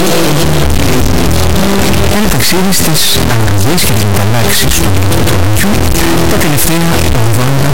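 Integer read as float affects the audio throughout, a harsh, extremely loud buzzing square wave that falls silent in very quiet passages, consistent with 32-bit integer samples decoded as 32-bit float.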